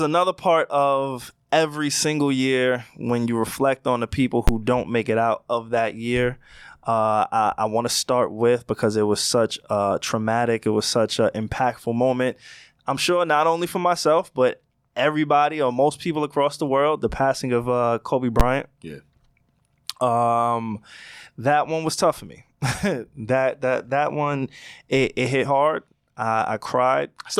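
A calculation produced invalid numbers at full scale, pinning the output at maximum for a brief block, which fits a 512-sample buffer; this speech cracks with a single loud bang at 4.48 s and 18.40 s.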